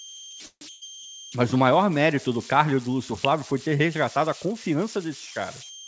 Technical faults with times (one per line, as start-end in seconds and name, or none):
0.00-5.88 converter idle tones
0.46-0.63 call audio freeze
0.71-0.84 burst of packet loss
3.25 electrical switching spike